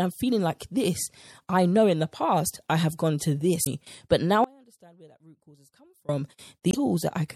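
Speech runs through a plainly audible MP3 compression sound throughout, watery and swirly, with the treble cut off flat and sibilants chirping, likely from a low-bitrate encode around 64 kbps; a spectrogram shows a hard ceiling on the highs and speckled, flickering patches where weak components switch on and off. Damaged data in the compressed stream produces brief disturbances at 3.62–3.67 s and 6.69–6.75 s, where the decoder misreads frames and resyncs; each shows as a short smear of broadband noise or an odd block on the spectrogram, with a small discontinuity in the waveform. From 4.44 to 6.09 s, about 1.6 s, the speech drops out abruptly to a faint residue about 30 dB down rather than true silence, the waveform collapsing to a thin sliver with sharp edges at both ends, likely a dropout in the signal while the path after it stayed live.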